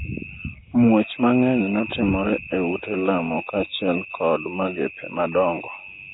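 From start to finish, the audio was likely passed through heavy Nellymoser compression, which fits a bitrate around 16 kbps. Weak bands were starved of bits and refilled with noise, and nothing remains above 3.8 kHz. The speech sounds rough, hissy and smeared, as if underwater.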